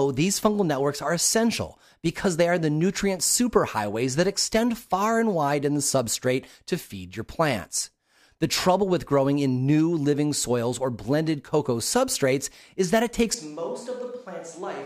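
The close microphone's feed likely dropped out at 13.34 s, leaving a switch to a distant microphone until the end. The speech turns suddenly roomy and hollow, thinner in the bass, roughly 10 dB quieter, with more room noise beneath it.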